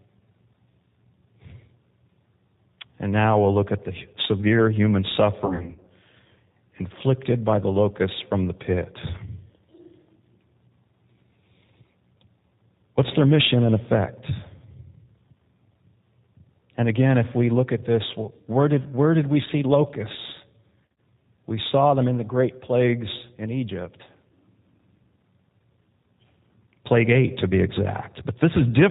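Speech passed through the G.729 codec, with plainly audible low-rate damage consistent with 8 kbit/s G.729A: nothing above 4 kHz, and a slightly rough, synthetic quality throughout. VoIP packet loss concealed by the speech codec strikes at 5.46 to 5.88 s and 20.86 to 20.98 s, where the decoder patches scattered gaps of up to 60 ms, leaving fading buzzy smears and weak, distorted speech.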